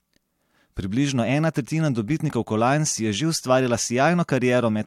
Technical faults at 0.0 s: none

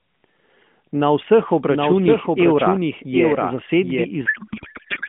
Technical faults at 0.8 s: none

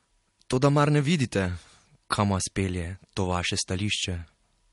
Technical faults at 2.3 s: transcoding between lossy codecs

